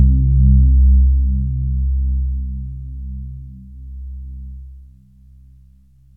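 Nothing in the audio stood out as a technical fault on listening.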